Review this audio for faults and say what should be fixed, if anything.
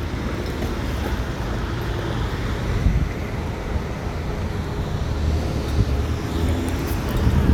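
No faults stand out in this audio, so nothing needs to be fixed.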